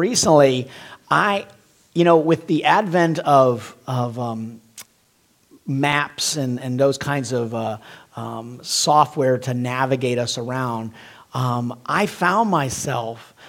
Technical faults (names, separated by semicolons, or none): CD scratch ticks